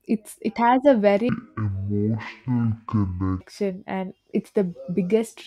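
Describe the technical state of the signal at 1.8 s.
At 1.8 s the signal is in a stereo read as mono fault. It runs from 1.29 to 3.41 s, after "it's it has a". Left and right samples are read in sequence as one channel. Speech plays at half speed, an octave low. A faint mirrored image fills the upper spectrum.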